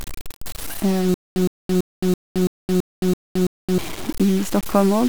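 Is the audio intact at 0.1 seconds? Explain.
No. At 0.1 seconds, as across the whole clip, the speech carries a grainy, gritty distortion that shifts with the sound itself, sitting only around 20 dB below the signal, with quiet stretches sputtering or dropping out. This is likely low bit depth without dither: the samples were truncated to 64 levels, which fits about 6 bits, so the rounding error tracks the waveform rather than forming a steady hiss.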